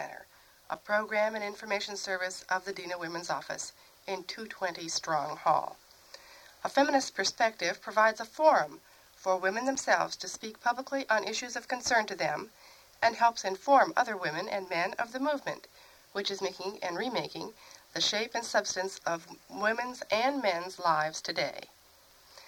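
At 0.74 s and again at 9.75 s the audio drops into a block of digital silence, about 5.8 ms the first time (a length that fits a 256-sample buffer) and about 8.7 ms the second. Each time the output was likely not filled in time, so the sound stops dead and restarts without a fade, heard as a sharp tick. On a waveform each shows as a flat, near-silent line with vertical edges, and on a spectrogram as a thin blank column with broadband clicks at both sides.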